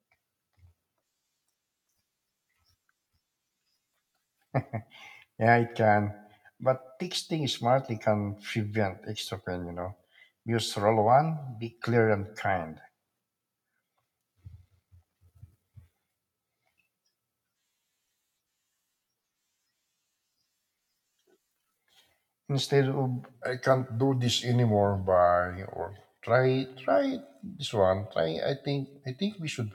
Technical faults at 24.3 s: section at the wrong speed

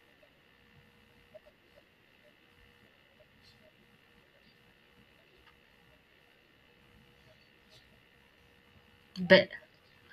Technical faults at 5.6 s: damaged data in a compressed stream

